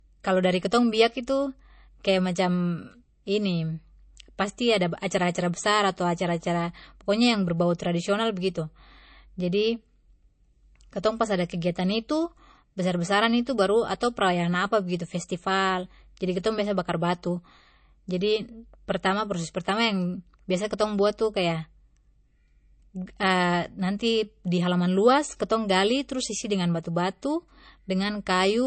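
Speech that sounds dull throughout, with nothing above about 8.3 kHz. This is low-bitrate audio saved at a high bitrate: a very low-bitrate MP3 was likely re-encoded at a much higher bitrate, which cannot restore the missing detail.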